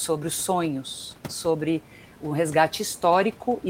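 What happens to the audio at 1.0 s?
Nothing goes wrong at 1.0 s: the speech carries on intact there, with only the room noise of the recording sitting about 21 dB below it.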